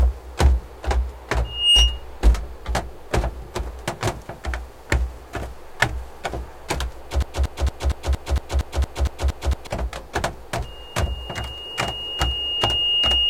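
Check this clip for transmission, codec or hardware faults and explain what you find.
Two kinds of fault are present, one of them occurring twice.

Loudspeaker feedback squeal, 1.44–2.04 s and 10.64 s to the end: the microphone re-amplifies its own loudspeaker until one frequency runs away, producing a 2.8 kHz tone. The tone swells within about 0.3 s to roughly 10 dB above the sound the first time, and more slowly over about 2 s to roughly 5 dB above it the second time.

Broken-record loop, 7.22–9.67 s: a 231 ms fragment repeats exactly, back to back, and the audio for that span is lost. The likely cause is a stalled player or stream resending its last buffer.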